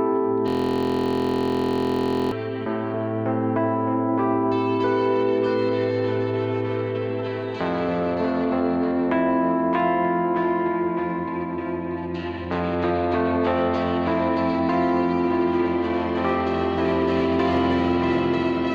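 A system hang loop runs from 0.48 to 2.32 s: one 23.22 ms slice repeats as a steady 43.1 Hz buzz, which fits a frozen 1024-sample ring buffer.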